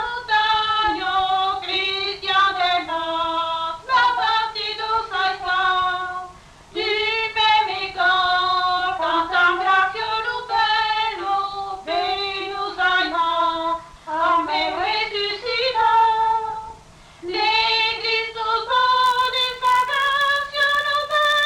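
From 19.04 s to the end of the clip, the audio carries a regular buzz at about 94 Hz, a filter restarted on every block. The filter drops its stored state at each block boundary, so every block opens with a small transient. The tick rate fits a 512-sample block, and the buzz rises and falls with the signal's level.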